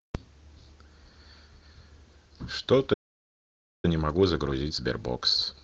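A speech recording whose flow halts at 2.93 s and goes dead silent until 3.85 s, a gap of about 0.9 s. That is a playback stall, most likely the player running short of buffered data and outputting nothing until it recovered. On a waveform it shows as a flat line cut abruptly into ongoing speech, and on a spectrogram as a blank vertical band spanning every frequency, with energy resuming sharply at its right edge. From 3.85 s to the end the speech is noticeably hurried, about 1.25 times normal speed with unchanged pitch. This is time-compressed catch-up, where the player trims its backlog by removing short slices and cross-fading the joins. On a spectrogram the harmonic spacing stays the same while syllables and pauses are packed closer together, and small seams or slight smearing can appear where pieces were spliced. The light Opus voice compression at 24 kbps in hybrid fullband mode leaves only mild codec texture throughout.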